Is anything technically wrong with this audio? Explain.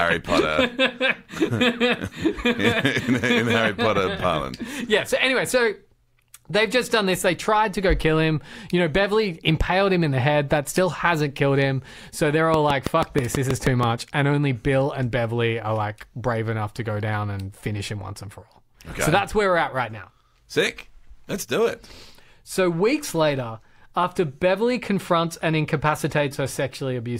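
Yes. A train of clicks runs from 12.54 to 13.84 s: around ten sharp pulses, evenly spaced at 6.2 per second, each with much the same shape and peaking roughly 15 dB above the speech. The steady spacing and similar shape suggest an outside source injecting pulses at a fixed rate, likely interference from nearby equipment or a faulty connection or power supply. It sounds like a quick, regular ticking laid over the speech for just over a second.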